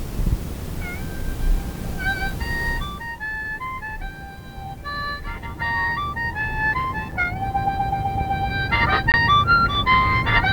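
At 7.11 s and 9.12 to 9.14 s, gaps between stream segments open. Timestamps misalign at 1-second segment boundaries, inserting hard-edged silences of about 6 and 19 ms.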